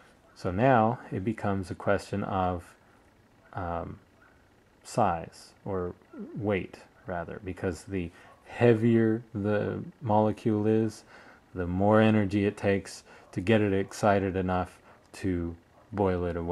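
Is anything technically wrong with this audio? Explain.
No, nothing technically wrong can be heard in this audio, and the signal holds steady throughout with no audible disturbance or interruption.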